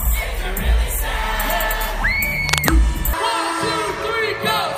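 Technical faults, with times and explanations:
2.48 to 2.71 s, cable scratch noise: a dense, ragged scratching burst about as loud as the sound itself, likely a worn cable or connector whose contact resistance flickered as it moved. The waveform shows jagged, irregular spikes, and the spectrogram shows a broadband smear of uneven vertical streaks.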